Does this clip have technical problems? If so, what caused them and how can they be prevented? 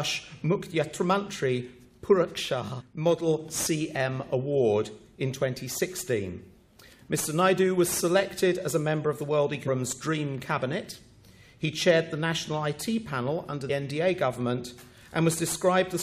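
Yes. Damaged data in a compressed stream caused three faults: corrupted bytes at 2.80 to 2.82 s, 9.67 to 9.69 s and 13.69 s made the decoder misread those frames and lose sync while it hunted for the next valid frame header. Each one comes through as a brief chirp or blip, roughly 15 to 25 ms long, cutting into the audio. Checksummed, reliable transfer and storage, with stream metadata kept out of the audio data, would prevent this.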